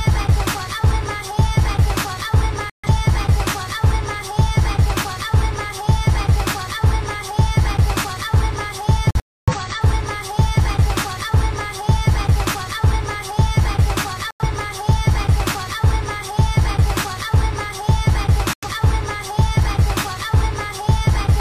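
Corrupt frame muted at 2.69, 9.11, 14.31 and 18.53 s: damaged compressed frames were rejected and replaced with silence, giving abrupt holes of 0.15 to 0.43 s while timing continues.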